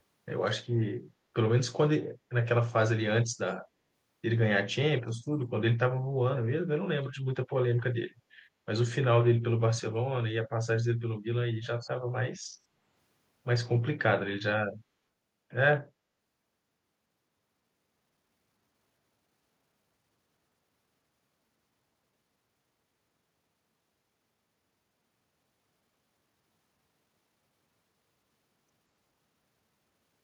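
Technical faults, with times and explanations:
11.8–11.9 s: echo leak, a brief faint copy of the speech returning 180 ms late, about 20 dB down, likely loudspeaker pickup slipping past the far-end echo canceller.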